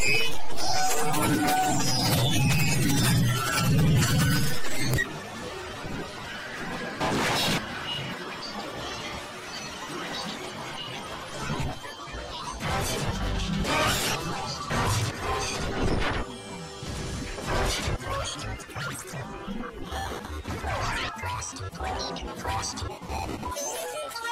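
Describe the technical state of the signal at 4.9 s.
At 4.94 s there's an uninitialised buffer: a tiny block, fitting about 32 samples, played leftover memory as audio, giving a loud crack.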